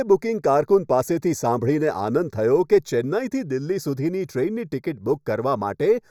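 From start to finish the speech carries channel delay with comb filtering. One channel arrives a fraction of a millisecond behind the other, a delay of only a few samples. When the two are summed to mono, the content they share cancels at evenly spaced frequencies. The first notch falls at around 3 kHz, right in the presence region. The voice sounds hollow throughout, with a fixed, phasey coloration that does not move.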